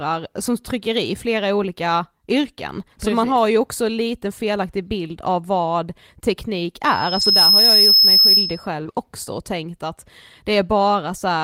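At 5.03 to 5.13 s the speech turns briefly rough and grainy for about 60 ms, with no gap. This is a lost packet rebuilt from error correction. Packets went missing, consistent with three 20 ms frames, and the decoder played the low-bitrate copies carried in the packets that followed. Those copies hold less detail, so the sound coarsens and any top-end content is only estimated.

From 6.84 s a thin whistle at 5.2 kHz swells over roughly half a second into a steady squeal that sits about 10 dB above the speech and holds until 8.67 s. This is loudspeaker feedback squeal. The microphone was picking up the loudspeaker it fed, and at 5.2 kHz the loop gain passed one, so that single frequency kept reinforcing itself until it saturated.

Inside the squeal, at 7.21 to 7.27 s, another lost packet was rebuilt from error correction. About 40 ms of speech becomes coarser, which fits two missing frames that were replaced by their low-bitrate copies.

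At 8.83 to 8.94 s there is a brief smear, where about 20 ms of audio never arrived in time. This is short concealed packet loss. The receiver extended the preceding sound to fill the hole and then blended back, stretching the passage by roughly 10 ms. Overlapping it, at 8.85 to 8.87 s, a single 20 ms frame was rebuilt from error correction and briefly sounds rougher.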